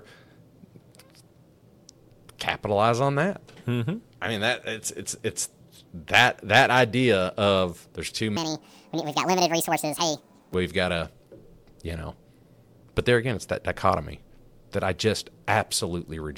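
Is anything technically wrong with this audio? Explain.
Yes. From 8.37 to 10.54 s, right after "there's too" and before "we've got to", there is a section at the wrong speed: the speech runs 1.69 times too fast, likely from a clock mismatch, rising about ten semitones. On a spectrogram its harmonics jump upward and spread apart, and the waveform looks compressed in time.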